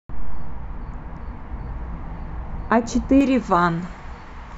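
Speech, and from the start to about 3.21 s it's been hit by de-emphasis applied wrongly: a treble cut meant to undo pre-emphasis that either wasn't there or had already been undone, sloping smoothly down to about 11 dB lower at 10 kHz than at 1 kHz, so that stretch sounds dull and muffled.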